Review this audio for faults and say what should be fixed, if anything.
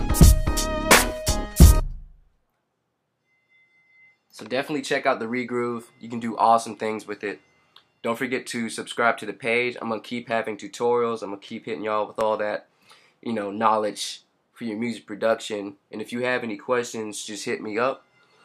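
Two isolated clicks are audible, at 6.24 s and 12.21 s. Each is a single sharp tick with nothing missing from the surrounding sound, and each is likely caused by dropped samples: a fraction of a millisecond of the stream is lost, so the waveform steps abruptly from one value to a later one and that discontinuity registers as a click. To prevent it, give the capture or transfer buffers enough headroom that samples are never discarded under load.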